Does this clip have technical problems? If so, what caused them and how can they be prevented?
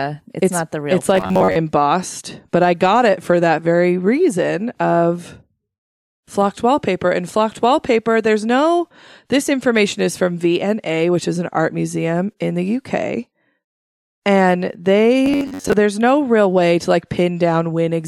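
Yes. The speech turns into robotic sound from repeated short buffers from 1.15 to 1.56 s and again from 15.26 to 15.73 s. Each time the voice becomes a rigid, metallic buzz locked at 93.8 Hz, which fits a segment of about 10.7 ms being replayed while most of the real audio, roughly 70%, is skipped. The likely cause is audio arriving too slowly. Larger buffers and a stable, uncontended processing path prevent it.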